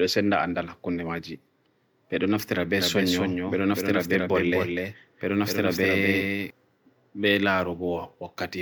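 From 2.78 to 6.50 s there's a doubled audio track: a second copy about 5 dB quieter trails about a third of a second behind, likely from a slower duplicate capture path.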